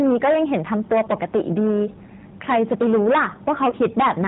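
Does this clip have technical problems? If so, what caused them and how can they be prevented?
Yes. Hard clipping runs through the whole recording. The speech was driven about 15 dB past what a stage in the chain could pass, so the peaks were cut flat; roughly a sixth of the samples sit on that ceiling. The squared-off tops create harmonics high in the spectrum, which you hear as a harsh fuzz on every louder syllable rather than occasional crackle. Setting input gain so peaks stay several decibels below full scale prevents it.

The G.729 codec damage is plainly audible throughout. This codec does not store the waveform. It rebuilds speech from a vocal tract filter, a pitch predictor and a few pulses per frame, and its sound fits the 8 kbit/s G.729A version. As a result, nothing above 4 kHz survives, and the voice comes across as narrow, slightly rough and synthetic. Using a wideband codec such as G.722 or Opus, where both ends support it, avoids this.

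VoIP packet loss, concealed by the speech codec, occurs between 3.70 and 3.74 s. About 20 ms of audio went missing, which points to a single lost packet. The decoder filled the gap by extrapolating from its last pitch and filter settings while lowering the gain, so that stretch is smeared out and fades. Because each frame builds on the previous one, the voice stays weak or distorted for tens of milliseconds or more after about 3.74 s. A steadier network path with adequate jitter buffering, or forward error correction, prevents it.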